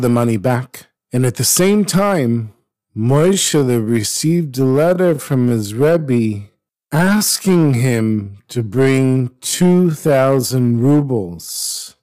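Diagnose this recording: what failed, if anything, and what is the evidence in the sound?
A gain stage drove the speech about 6 dB past full scale, and the converter or sample-format conversion cut the peaks flat. That is hard clipping across the whole recording. A few percent of samples sit pinned at the limit. The squared-off tops add harmonics high in the spectrum, so the peaks of loud syllables carry audible distortion. The distortion tracks the level of the voice throughout.

From 2.41 s, right after "at the same", the pace suddenly drops to about 0.63 of normal speed and stays there to the end, while the pitch does not fall. That combination points to a time-stretched section, likely from processing that padded the audio to fill a length by repeating short fragments. The slowed speech drags from that point on.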